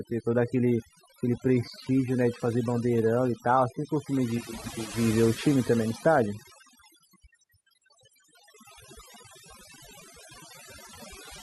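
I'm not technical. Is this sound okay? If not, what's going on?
No, not quite. The whole recording has overdone noise removal: a cleanup tool pushed too hard strips away the background noise, but it takes the softer parts of the speech with it. That's why the gaps sound eerily silent with little sparkly specks.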